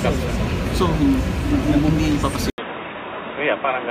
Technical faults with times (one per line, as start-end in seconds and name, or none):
2.50-3.91 input switched to a poorer device